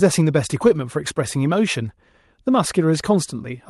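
Nothing goes wrong anywhere in this speech, which comes through an ordinary call path whose top end stops at around 12 kHz, about what you'd expect from Opus at a modest bitrate.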